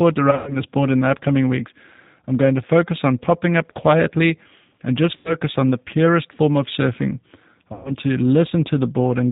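The whole speech clip runs through the G.729 codec at 8 kbit/s. Nothing above 4 kHz survives. The speech sounds plainly rough and synthetic. VoIP packet loss concealed by the speech codec strikes at 0.31 to 0.57 s, 5.17 to 5.35 s and 7.73 to 7.95 s. Each time, the decoder stretches the last sound into a fading buzzy tone or coloured noise. The speech stays weak briefly afterwards.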